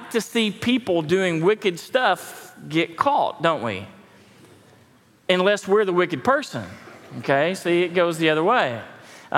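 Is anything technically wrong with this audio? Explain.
No, nothing technically wrong can be heard here.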